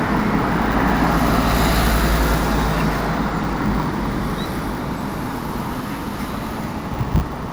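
An everyday sound recording carries a steady 100 Hz buzz throughout that rises and falls with its level. This is a filter restarted on every block, with each 10 ms block starting from silence and adding a small tick.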